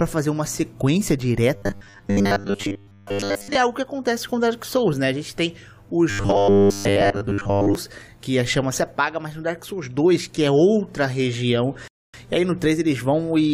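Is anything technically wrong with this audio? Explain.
Yes. There are two kinds of fault. From 1.56 to 3.55 s and again from 6.10 to 7.75 s, the audio takes on robotic sound from repeated short buffers: a rigid metallic buzz at 100 Hz. The likely cause is late-arriving data, with the software looping roughly 10 ms segments and skipping most of the real audio.

At 11.88 to 12.14 s there is a rebuffering stall. Playback drops to silence when the downloaded audio runs out, then resumes exactly where it stopped. Nothing is lost, but about 260 ms is added.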